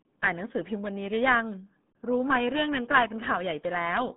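RealAudio 14.4 codec damage runs through the whole clip: the speech is muffled and gargly, with nothing above about 3.8 kHz and a band of roughly 150 Hz to 3.7 kHz. The heavy smearing points to an 8 kbit/s dial-up coder.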